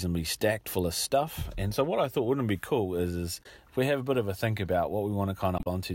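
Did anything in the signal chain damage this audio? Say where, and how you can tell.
Yes. The damage sits at the codec stage, as damaged data in a compressed stream. There are two short disturbances. The first runs from 3.40 to 3.46 s, between "be cool is is" and "if we have a". The second runs from 5.56 to 5.67 s. Some bytes in the compressed frames were wrong. The decoder misread them, lost frame sync and then locked onto the next valid header.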